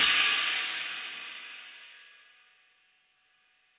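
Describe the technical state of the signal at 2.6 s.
At 2.6 s the audio is intact, with no dropout, glitch or distortion, and the sound carries the narrow band of a telephone-style call path, with nothing above 4 kHz as G.711 mu-law coding at 64 kbps would give.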